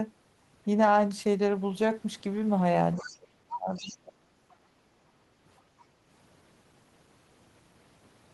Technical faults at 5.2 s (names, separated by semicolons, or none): background gated by the echo canceller